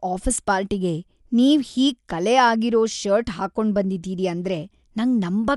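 Throughout, the speech is dull, with nothing above 11.4 kHz and a rough, fluttering noise. This is likely Dolby Digital compression at a low bitrate, around 64 kbps.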